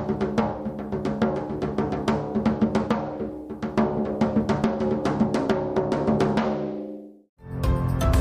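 No technical faults can be heard anywhere in the recording.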